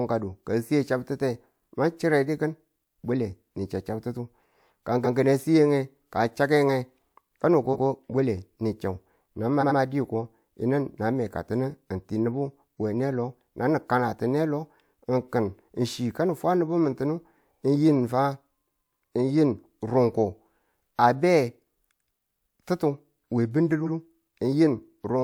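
Clock slip clicks run through the whole speech recording, from 0.12 s to 25.06 s: faint ticks arrive about every 0.4 s, roughly seventy in all, each consistent with a single sample being dropped or doubled. The steady spacing points to a clock mismatch of around 50 ppm between two devices running unsynchronised, the likely cause, where the drift builds up to one whole sample at regular intervals and forces a slip. The ticks are most noticeable under sustained, louder passages. Repeated frames cause stutters at 5.03 s, 7.72 s, 9.60 s and 23.85 s, where a short stretch of decoded audio plays again. The blocks at 5.03 s and 7.72 s are each 128 ms long and replay once. The block at 9.60 s is about 85 ms long and replays twice, adding about 171 ms. The block at 23.85 s is about 85 ms long and replays once. Together the repeats add roughly half a second to the audio, consistent with runs of compressed frames being stored or transmitted more than once before decoding.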